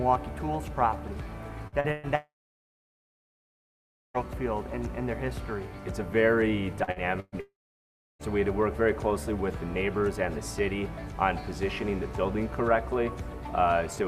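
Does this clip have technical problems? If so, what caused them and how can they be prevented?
Yes. In two stretches the network delivered packets unevenly: from 1.67 to 2.06 s and again from 6.84 to 7.35 s, repeated packet loss (robotic sound) left three gaps each time, totalling about 200 ms. The longest gaps were 115 ms and 122 ms. The receiver filled each hole by extending the last sound, so roughly half of the first span and 40% of the second is synthetic, heard as choppy fragments. A larger jitter buffer, forward error correction and a more stable connection would reduce this.

Each burst of loss runs straight into a longer gap. The likely cause is a long network dropout in which nothing arrived at all. From 2.15 to 4.25 s, about 2 s of audio is gone. The last sound is stretched into a brief fading buzz, followed by about 1.8 s of near silence before the sound resumes with that section missing. 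From 7.40 to 8.22 s, about 0.8 s is lost in the same way, including roughly 0.67 s of silence. Prioritising the audio stream with QoS and using a wired or more reliable link would help prevent such outages.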